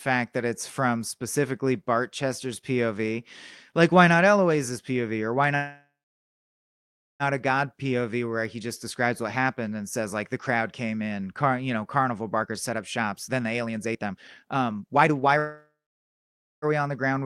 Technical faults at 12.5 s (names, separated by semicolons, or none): jitter buffer speed-up